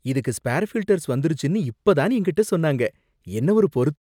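A speech recording with no technical problems to point to. Near the very end, at about 3.98 s, the level eases away in a smooth fade-out with no click or hard edge.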